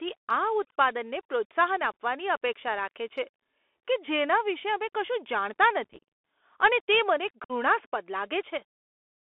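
The Bluetooth CVSD headset codec runs throughout. The speech is confined to roughly 300 Hz to 3.5 kHz, and the 64 kHz one-bit delta coding plainly damages it. Loud high sounds outrun the adaptive step, s sounds turn scratchy, and a granular hiss lies underneath. That hiss and the slope distortion set it apart from a merely band-limited phone line.

Unconcealed Bluetooth headset packet loss follows. From 5.84 to 6.03 s, just after "અમે કશું જાણતા", dozens of short packets drop out, 139 ms in total scattered over 251 ms, with the longest gap 34 ms. Around fifteen more go at 7.44 to 7.52 s, 53 ms lost. The result is hard-edged holes and a chopped crackle, not the smoothed-over gaps that concealment would leave.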